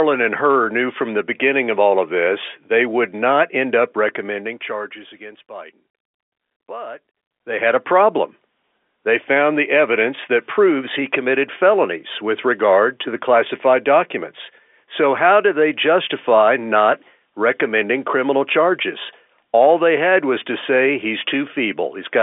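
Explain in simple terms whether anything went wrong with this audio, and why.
Nothing went wrong with this audio; no fault can be heard anywhere in it.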